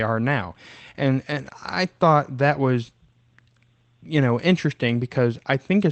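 No technical faults can be heard in the speech, which arrives through a WebRTC call path working as intended, with the top of the band cut at 8 kHz and the usual coding texture that fits Opus at a modest bitrate of around 20 kbps.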